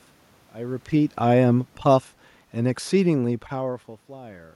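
A short speech clip with automatic gain falling from 1.19 s to 3.47 s: the gain control judges the input too hot or its background noise too strong and pulls it down by about 8 dB, so the voice and the room noise sink together. The level shifts around 0.5 s and 3.5 s are just the talker moving.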